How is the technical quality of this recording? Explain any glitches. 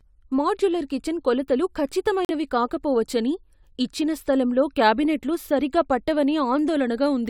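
The recording has one glitch: a brief dropout in the speech.

A corrupt frame muted fault occurs from 2.25 to 2.30 s. Bits inside compressed audio frames were damaged, the decoder rejected them, and the player filled the gap with silence rather than garbage. The speech cuts out abruptly for about 56 ms, a span that fits two consecutive frames being discarded, then resumes exactly on time, since the muted frames keep their place in the timeline.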